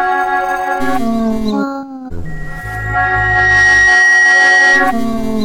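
At 2.25 s a loudspeaker feedback squeal begins. A single tone near 1.9 kHz swells over roughly a second and a half. It settles around 5 dB above the sound. The microphone is hearing its own loudspeaker, and loop gain exceeds one. The squeal stops at 5.05 s.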